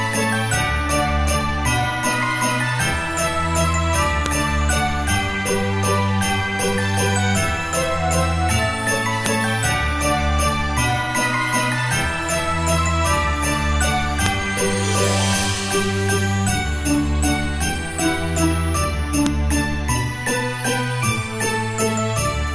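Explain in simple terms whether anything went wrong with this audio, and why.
Separate 5-second pieces of audio were joined together without removing the small block of file information, the header, at the start of each piece. Those header bytes were then played as if they were sound, a fault called a file header played as audio. You hear it as a sharp, loud click at 4.26, 9.26, 14.26 and 19.26 seconds, one every five seconds, wherever each new piece begins, no matter what the sound is doing.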